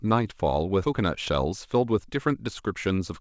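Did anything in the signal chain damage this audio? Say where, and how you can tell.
Yes. In the network or at the jitter buffer, roughly 0.7 s of queued speech was discarded at 0.84 s while later audio was already waiting, a skip ahead. Playback jumps forward with no fill, so the two sides of the cut butt together almost seamlessly and a chunk of speech simply vanishes.

The jitter buffer then ran a jitter buffer speed-up from 0.93 s to 3.20 s, trimming short pitch-period slices repeatedly to drain excess delay, about a fifth of a second in total. The speech plays at 108% speed at unchanged pitch, sounding hurried, within the G.722 band that stops at 8 kHz.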